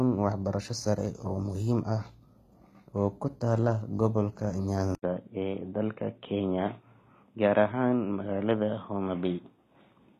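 Speech recording, likely passed through HE-AAC compression at a low rate, around 20 kbps by the sound: the replicated treble is plainly gritty and lispy on sibilants, with nothing above 14.9 kHz. At 4.95 s the input likely switched to a poorer device. After an 80 ms gap, the sound turns dull and boxy with nothing above 3.8 kHz to the end, at about the same level, and a faint new noise floor sits far below the speech.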